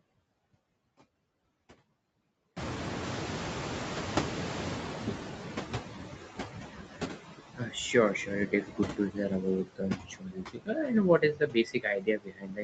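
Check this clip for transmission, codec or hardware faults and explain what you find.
The faults here come from the noise suppression in the call chain, not from the codec or hardware. The Opus path shows only its expected top-end limit at 8 kHz.

Noise suppressor artifacts run through the whole clip. The suppressor lowers the bands it judges to be steady noise by about 8 dB, one frame at a time. The leftover background dips between phrases and swells under speech.

The noise suppressor is catching up from 2.56 to 6.18 s. The room noise jumps by about 21 dB near 2.5 s, but the suppressor's noise estimate lags for roughly 3.6 s. The louder background therefore comes through with less reduction at first, then sinks as the estimate adapts, reaching about 11 dB of reduction.

Speech is cut by the noise suppressor at 7.56–7.74 s, 8.47–9.44 s, 9.64–10.9 s and 11.19 s to the end. The suppressor mistakes parts of the speech for noise and turns them down with the background, by about 12, 14, 21 and 21 dB at the deepest. 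The affected stretches grow from around 150 ms to about a second, and the last runs to the end. Word endings and softer passages sound swallowed or faint, most severely in the final two stretches.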